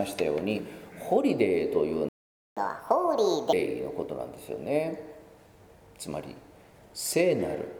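The audio cuts out abruptly at 2.09 s and stays silent until 2.57 s, roughly half a second of dead air in mid-flow. That's a playback stall, most likely the player running dry of data or its thread getting blocked before it could pick up again. Right after it recovers, from 2.57 s to 3.53 s, the sound runs at 1.5 times normal speed and jumps up around seven semitones in pitch. That's catch-up at higher speed: the player resamples its backlog to claw back the lost time, then drops back to normal pace once it's caught up.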